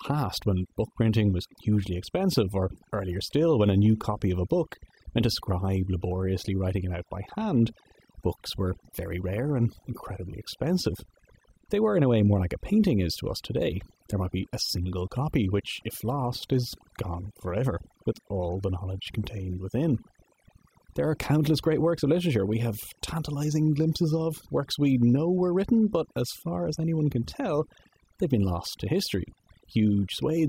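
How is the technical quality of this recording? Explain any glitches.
Overdone noise removal runs through the whole speech recording. A noise reduction stage set far too aggressively cuts individual frequency bands whenever they sit near its noise estimate. The background drops and breaks up into twinkling, warbling artefacts.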